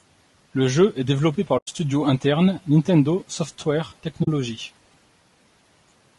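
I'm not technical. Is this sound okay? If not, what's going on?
No. The speech sounds rough and grainy throughout, with a hiss-like fuzz woven into the voice and a dull or slightly artificial top end. This is most likely low-delay AAC compression, the kind used on video calls, squeezed too hard. Unlike background noise, the grain sits inside the voice itself and comes and goes with it.

There are also two brief gaps from AAC frame loss with muting: one from 1.57 to 1.69 s, right after "jeu est développé par", and a shorter one from 4.23 to 4.28 s. Small chunks of audio went missing and were replaced by silence. These gaps fade softly out and back in.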